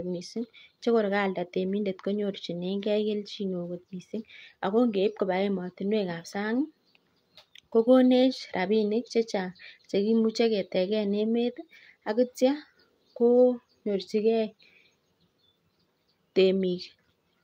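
No technical faults can be heard anywhere in the recording. Nothing in the signal calls for comment at any point.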